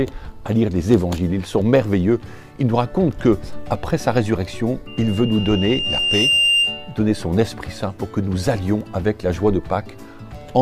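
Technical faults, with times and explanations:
4.87 to 7.03 s, loudspeaker feedback squeal: a 2.8 kHz tone swells over about a second and a half until it sits roughly 5 dB above the rest of the audio. The mic is picking up its own speaker, and at that frequency the loop gain tops one, so the tone keeps feeding itself.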